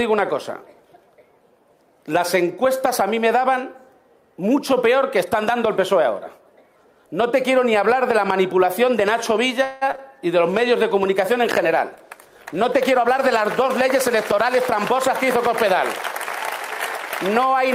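At 9.63 s the sound stalls into a fading buzzy continuation for 0.18 s before resuming exactly where it left off. That points to a call audio freeze, likely from packets held up in transit emptying the jitter buffer. Nothing is lost, only delayed by 180 ms. That sets it apart from the dropouts that follow.

Between 9.91 and 10.09 s, with a second event nested at 9.96 to 9.99 s, short concealed packet loss appears. Two 20 ms pieces never arrived and were patched by extending the preceding sound. The result is brief smears or wobbles where real audio is genuinely missing rather than postponed.

From 10.37 to 16.17 s a call bitrate drop takes the encoder from 64 to 23 kbps, bottoming out for about 4.6 s. The sound turns coarse and duller as high frequencies are trimmed. The change is in tone, not timing.

Overlapping that, from 13.08 to 15.74 s, a jitter buffer speed-up trims pitch-period slices totalling about a tenth of a second to shed built-up delay. 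Playback runs 3% fast with pitch unchanged. The result is a small speed-up rather than any change in timbre.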